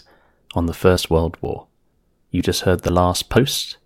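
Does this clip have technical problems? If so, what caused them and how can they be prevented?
Yes. The recorder likely lost about 20 ms each time it closed one 0.5 s chunk and opened the next. This audio missing between chunks is heard as abrupt skips at 0.49, 0.97, 1.45, 2.41, 2.89 and 3.37 s, just before and after "on the". Double-buffering the chunk handoff would prevent it.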